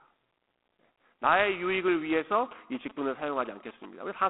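A harsh, rasping hiss rides on this speech clip throughout, rising and falling with the speech, and the sound is confined to a narrow telephone band of about 250 Hz to 3.4 kHz, with nothing above 3.9 kHz. This is G.726 ADPCM coding, where each sample is sent as a coarse difference from an adaptive prediction. The plainly audible roughness fits the 24 kbit/s mode. From 2.51 to 3.86 s, a galloping pattern of short buzzes at a 217 Hz repeat rate sits well below the speech. These are GSM signalling bursts from a nearby 2G phone, rectified by the audio circuit.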